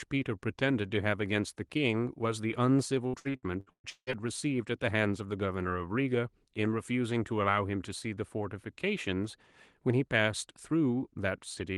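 Repeated packet loss hits this speech recording between 3.07 and 4.22 s. Over that stretch of a call path, seven separate holes open in the stream, the longest about 170 ms. Each is patched by stretching the last decoded sound, so roughly half of that second is concealment rather than real audio. The result is a choppy, robotic texture with pieces of speech missing, over audio band-limited to about 12 kHz in a way that fits the Opus codec.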